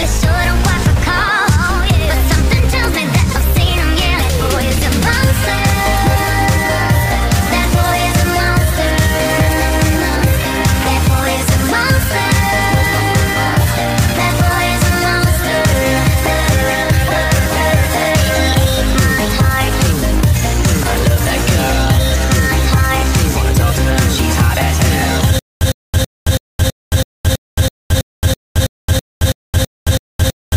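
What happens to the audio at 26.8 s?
At 26.8 s you're inside a stutter with silent gaps that starts at 25.39 s and runs to the end. A roughly 108 ms burst repeats every 327 ms with about 220 ms of dead silence between, likely a stalled stream replaying its last fragment on each retry.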